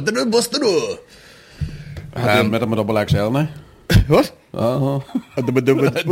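From 1.94 s to the end there's sample clock jitter: an unsteady converter clock, wobbling around 10 microseconds, adds slope-dependent hiss roughly 30 dB under the sound, worst on loud, bright passages.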